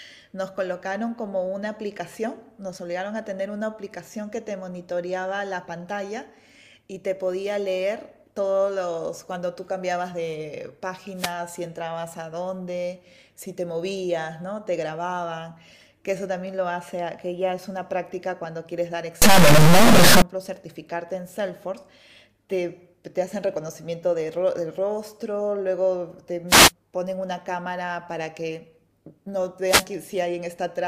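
At 11.15 to 11.34 s a wireless microphone noise hit gives a short swish of static as the FM radio signal fades and receiver noise covers the speech. From 19.22 to 20.22 s harsh, buzzy distortion fills the sound and pauses turn noisy, likely a stuck bit near the top of the word, with errors roughly 5 dB below full scale. Further wireless microphone noise hits recur at 26.47 to 26.72 s and 29.64 to 29.87 s, each a brief static burst.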